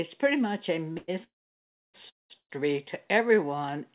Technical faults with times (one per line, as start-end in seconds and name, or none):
0.92-0.98 short stall from a late packet
0.98-2.52 call audio freeze
3.28-3.57 jitter buffer slow-down